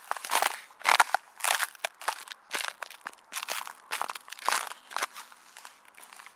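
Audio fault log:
Nothing wrong turned up here; there isn't a single glitch or problem worth logging anywhere in it.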